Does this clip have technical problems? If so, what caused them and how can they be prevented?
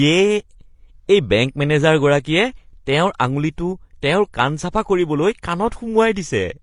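Yes. Throughout the speech, two layers of codec artefacts are heard together, with nothing above about 18.2 kHz, likely from transcoding between lossy codecs, a low-rate Vorbis-like encode re-encoded as HE-AAC. Encode once from the original source, avoiding any lossy-to-lossy conversion.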